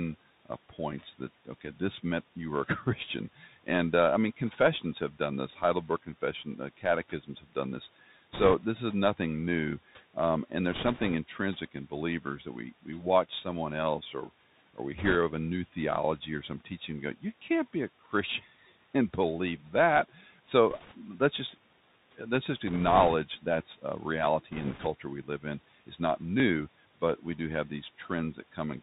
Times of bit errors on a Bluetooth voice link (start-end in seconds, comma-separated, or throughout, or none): 8.33-8.54, 10.71-11.14, 14.98-15.16, 20.71-20.95, 22.67-23.14, 24.52-24.87